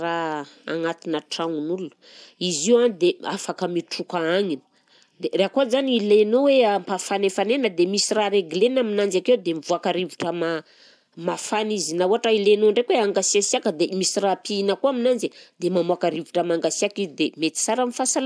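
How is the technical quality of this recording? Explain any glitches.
No glitches are audible anywhere in this speech recording.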